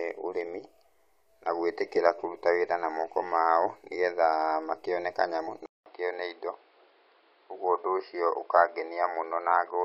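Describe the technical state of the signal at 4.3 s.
At 4.3 s the signal is intact, with no dropout, distortion or other fault to be heard.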